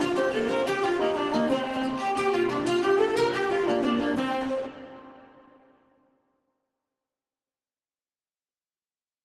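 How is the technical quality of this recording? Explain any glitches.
Nothing here counts as a glitch: the audio has the slightly softened, coded character of a call and a top end that stops at about 12 kHz, consistent with an Opus call path, but nothing breaks up, drops out or jumps along the way.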